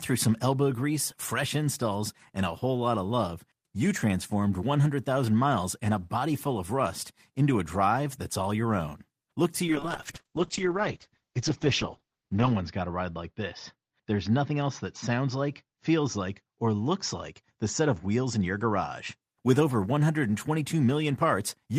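A call bitrate drop from 9.72 to 19.27 s starves the encoder, fitting a fall from 32 to 8 kbps; speech turns coarse and muffled, capped at 8 kHz.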